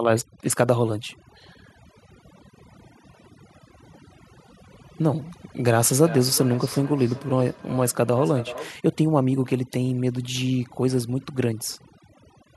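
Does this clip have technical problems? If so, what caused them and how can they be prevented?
Yes. Overdone noise removal runs through the whole clip. The noise reducer is set so aggressively that it cuts individual frequency bands to nothing whenever they come close to its noise estimate, and the quieter parts of the speech fall below that threshold along with the noise. The result is a near-silent background scattered with twinkling artefacts. Prevention: reduce the noise-reduction strength or set a floor on how far each band can be attenuated, and cut noise at the source when recording.

From 5.9 s to 8.77 s there is feedback echo between two devices. Two devices in the same room are on the call, and one plays back what the other's microphone captured. That microphone picks up the playback and sends it round again. Each device's echo canceller only knows about its own output, so neither removes the loop. 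The speech returns roughly every 0.4 s, thinner and more ringing on each pass, peaking at about 13 dB below the direct speech. Prevention: have only one device in the room join the call with audio, or mute the second device's microphone and speaker.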